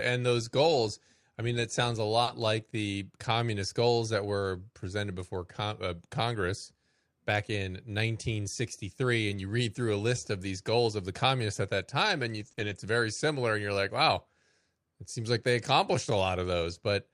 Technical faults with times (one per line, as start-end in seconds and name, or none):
2.23-2.29 short concealed packet loss
2.27-2.29 lost packet rebuilt from error correction
9.31-9.37 lost packet rebuilt from error correction
12.35-12.73 lost packet rebuilt from error correction
12.51-12.59 short concealed packet loss